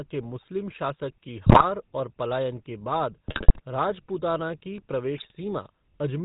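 The whole recording carries the GSM full-rate codec. The sound has a buzzy, gravelly roughness and nothing above 4 kHz, which fits the original 13 kbps full-rate coder. It models the vocal tract and drives it with a coarse pulse excitation that keeps only one sample in three. Unlike packet loss or dropouts, this grit is steady in every syllable rather than arriving in bursts, and the damage is plainly audible.

On top of that come GSM bit errors in three bursts: 1.46 to 1.64 s, between "शासक की" and "और पलायन के"; 3.27 to 3.60 s, the longest; and 5.17 to 5.32 s, the mildest. Corrupted filter, pitch and gain values reach the decoder, so frames come out with a warped spectrum or a sudden level jump. The result is squawks, pops and gargling. Clean packet loss would give gaps or smeared repeats instead.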